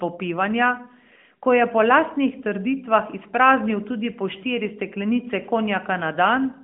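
Nothing's wrong with this speech clip; it's simply coming through an AMR-NB mobile codec at 12.2 kbps, confined to the usual 200 Hz to 3.4 kHz phone band.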